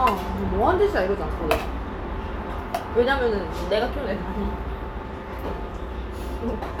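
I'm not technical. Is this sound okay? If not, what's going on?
Yes, it's fine, and there's nothing here that needs fixing or worrying about.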